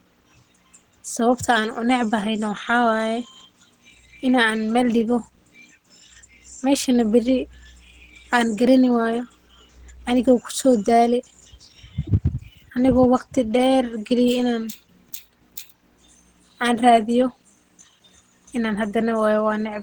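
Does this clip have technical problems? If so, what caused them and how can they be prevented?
No, nothing in this speech clip stood out as a technical problem on listening.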